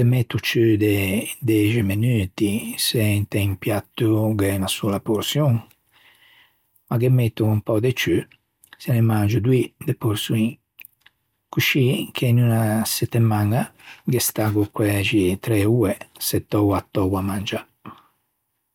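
Listening closely to the speech, nothing stood out as a technical problem at any point.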